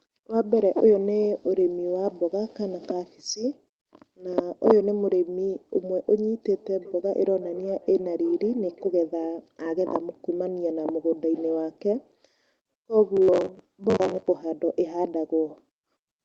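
From 6.52 s to 9.33 s there is feedback echo between two devices. A second device in the same room is playing back this microphone's signal, and the microphone picks it up again. Each echo canceller removes only its own device's playback, so this loop goes unsuppressed. The speech returns at a fixed interval of roughly 0.4 s, thinner and more ringing on each pass, peaking at about 19 dB below the direct speech.

From 13.17 s to 14.28 s the speech takes on a rigid, metallic buzz at 93.8 Hz while still roughly tracking the syllables. This is robotic sound from repeated short buffers, likely caused by audio arriving too seldom so that playback loops the last fragment to fill the gap. The buzz period fits a buffer of about 10.7 ms, and something like two fifths of the stretch is repeated material rather than new audio.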